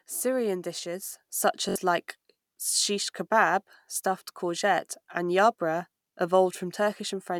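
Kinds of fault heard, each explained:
Microphone volume stepped up: At 1.02 s the level jumps by about 4 dB in a single step, voice and background together, because the call software judged the microphone too quiet and raised the device's input volume all at once instead of ramping it.
Bluetooth stutter: From 1.69 to 1.76 s, roughly 64 ms of audio goes missing, which fits about three lost packets. The receiver fills the gap by replaying its last short buffer, giving a brief buzzing repeat, then the speech resumes further along.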